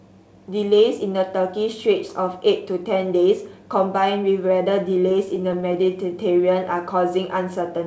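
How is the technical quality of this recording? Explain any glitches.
The recording has one clear glitch, a burst of stutter in the last few seconds, and its sound has no content above 8 kHz, which fits a wideband call codec such as G.722.

Repeated stalls (stutter), 5.00 to 5.91 s: the speech catches and drags in ten brief hitches, the longest about 11 ms. Packets arrived late, so the jitter buffer kept running dry. The receiver stretched the last sound to fill about 100 ms in total, losing nothing.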